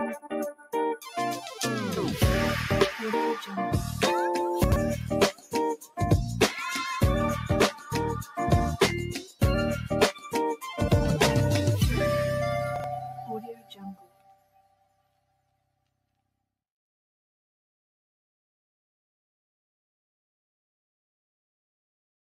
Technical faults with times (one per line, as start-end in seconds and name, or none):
0.00-22.35 noise suppressor applied to music or sounds
0.15-0.73 sound cut by the noise suppressor
4.64-4.76 chunks out of order
5.32-5.99 sound cut by the noise suppressor
7.71-8.38 sound cut by the noise suppressor
9.21-9.42 sound cut by the noise suppressor
10.13-10.29 sound cut by the noise suppressor
12.76-12.84 chunks out of order
13.06-16.36 sound cut by the noise suppressor